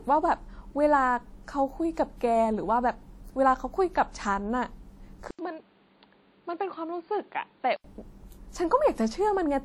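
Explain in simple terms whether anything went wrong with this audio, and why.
Two things went wrong. Throughout the recording, the speech has a smeared, watery quality with a hiss that seems to rise and fall along with the voice. That points to WMA compression, likely at a fairly low quality setting. This kind of codec squeezes audio by chopping it into chunks and throwing away detail it thinks you won't miss. The leftover errors get spread over a short stretch of time, and quieter details vanish, so the damage is plainly audible here.

The second problem runs from about 5.31 to 7.84 s. The recording likely switched its input to a poorer device, such as a different mic or a headset in call mode. There's a short gap of about 80 ms at the switch. After that, everything above roughly 4.7 kHz disappears, so the speech turns dull and boxy. It also gets somewhat quieter, and a new background noise comes in, well below the speech. 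After 7.84 s the sound clears up again.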